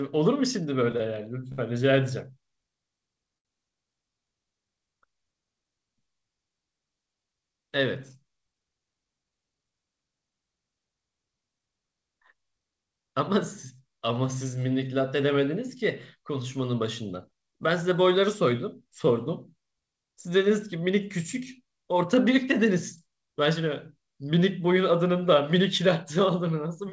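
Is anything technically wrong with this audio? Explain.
Yes, there are three network playback faults.

From 0.92 to 1.60 s there are repeated stalls (stutter). Packets arrived late four times, so the jitter buffer kept emptying and the receiver extended the last sound to cover about 114 ms in total, the longest gap 60 ms. Nothing is lost, but the audio drags and stutters.

At 3.38 to 3.47 s there is a short stall from a late packet. One packet missed its slot, and the receiver held the preceding sound for 65 ms before resuming at the same point. The result is a briefly frozen, slightly buzzy sound.

From 17.51 to 18.53 s there is a jitter buffer speed-up. Excess buffered audio was trimmed by cutting out tiny pitch-period slices, removing roughly 70 ms, so this stretch plays at 106% speed. Pitch stays the same, but delivery sounds noticeably hurried.

The sound has nothing above 8 kHz, consistent with the G.722 codec on this WebRTC call path.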